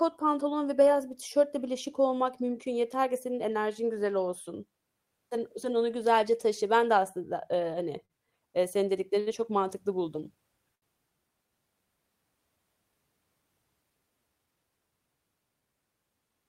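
At 8.05 to 8.13 s and again at 10.75 to 10.85 s, the speech hangs briefly in a short stall from a late packet. The jitter buffer ran dry, so the last sound was stretched by 43 ms and then 70 ms, with a slight buzz or dip. Unlike a lost packet, nothing is skipped. Playback simply resumes late.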